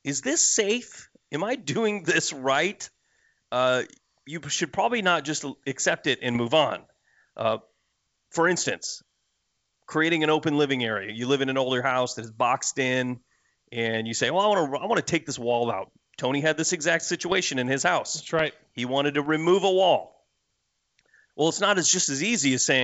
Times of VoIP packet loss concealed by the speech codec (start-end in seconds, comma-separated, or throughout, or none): none